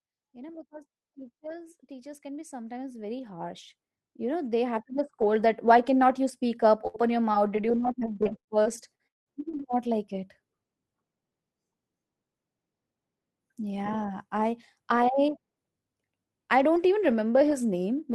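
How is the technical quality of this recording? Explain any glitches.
The recording has four audible glitches: a slow level swell at the start and three network-related disruptions between about 6.9 and 9.3 s.

From 0.19 to 5.62 s, voice and background swell together by about 19 dB, settling before "why cannot you speak". This is automatic gain rising: the gain control judged the input too quiet and gradually raised its gain.

Right after "cannot you speak up", from 6.87 to 6.97 s, the last sound is held and fades for 66 ms, then 60 ms is skipped. This is a burst of packet loss, with the receiver stretching the final sound over the gap.

Within that stretch, at 6.94 to 6.96 s, a 20 ms piece sounds rougher and noisier. It is a lost packet rebuilt from error correction, decoded from a low-bitrate copy carried in the next packet.

From 7.32 to 9.33 s, the audio turns choppy and robotic, with nine gaps, the longest 189 ms. 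About 20 percent of this span is patched sound and 440 ms is missing. This is repeated packet loss, with each hole filled by continuing the previous sound, and some of it roughly rebuilt from error-correction copies.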